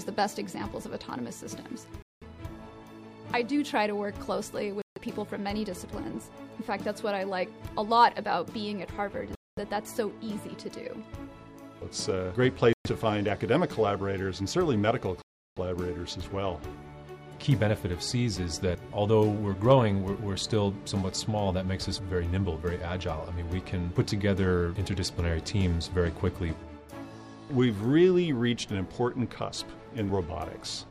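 The audio drops out to dead silence five times, each time picking up again where it left off, which sounds very much like a Bluetooth stall: the headphones' buffer likely ran dry while interference held up packets, then playback resumed once the resent data arrived. The gaps land at 2.02 s (about 190 ms), 4.82 s (about 150 ms), 9.35 s (about 220 ms), 12.73 s (about 120 ms) and 15.22 s, the longest at roughly 350 ms.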